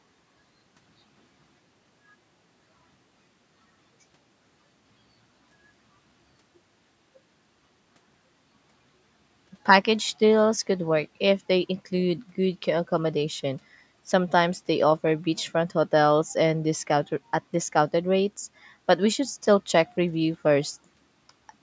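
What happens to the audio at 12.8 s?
Nothing goes wrong at 12.8 s: the audio runs on intact through that moment, with only the usual call microphone processing shaping it.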